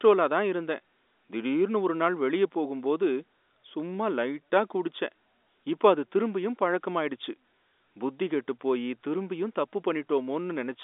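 Nothing stood out on listening to this speech clip.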